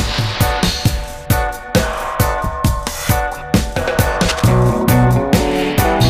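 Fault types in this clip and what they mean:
Cable scratch noise: from 4.28 to 4.48 s a dense, uneven burst of scratchy rustling sits over the sound, only about 10 dB below it, likely from a worn cable or connector being moved. Unlike a single click, it is a rough cluster lasting about 0.2 s.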